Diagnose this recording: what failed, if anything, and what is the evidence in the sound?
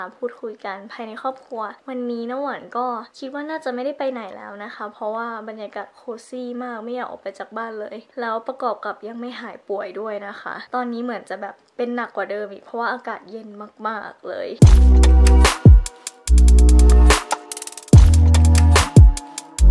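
Nothing failed; no fault is audible anywhere in the recording.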